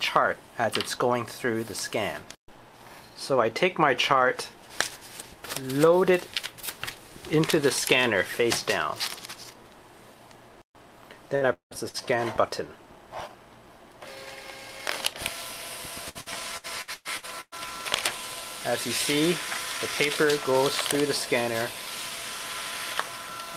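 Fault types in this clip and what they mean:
burst of packet loss: At 11.35 s and again at 11.89 s, roughly 60 ms of audio drops out and the preceding sound is stretched to cover it, then fades. On a spectrogram this shows as a brief frozen, smeared patch before content resumes abruptly.
long network dropout: From 11.53 to 11.74 s about 180 ms is lost, likely from a longer network interruption. The last sound is extended briefly and then gives way to roughly 120 ms of silence, visible as a flat gap in the waveform.
repeated packet loss (robotic sound): Between 16.09 and 17.67 s, eight separate gaps, the longest about 115 ms, are each patched by repeating the previous sound. About a third of the stretch is filled this way, giving choppy audio with pieces missing and a striped, repetitive spectrogram texture.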